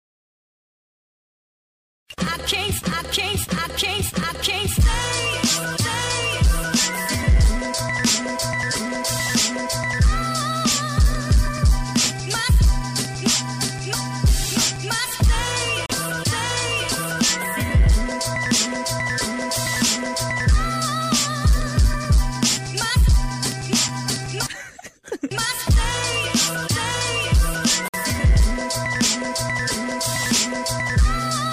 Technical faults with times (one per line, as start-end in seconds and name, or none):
15.86-15.89 gap between stream segments
27.88-27.94 gap between stream segments